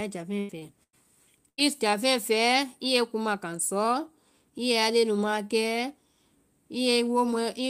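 At 0.39 to 0.51 s a burst of packet loss removes about 100 ms of speech. The receiver extends the last sound for roughly 94 ms, fading it into a held buzz or hiss, before resuming further on. At 0.59 to 0.63 s, short concealed packet loss covers about 20 ms with 25 ms of synthesized continuation, heard as a brief smear before blending back. The same burst recurs at 0.83 to 0.95 s and 1.49 to 1.60 s, each again dropping about 100 ms.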